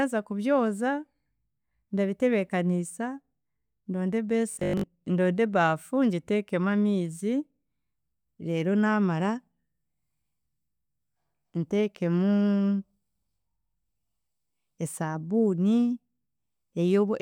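From 4.51 to 4.87 s, just after "ndonde a" and before "ndonde ebaafu ngiteekemu amiizi", the speech turns into robotic sound from repeated short buffers: a rigid, metallic buzz fixed at 50 Hz that still loosely follows the syllables. The likely cause is audio arriving too late, so most of that stretch is filled by looping the last 20 ms. Unlike a plain dropout or stutter, there's no silence or audible skip, just a steady mechanical pitch.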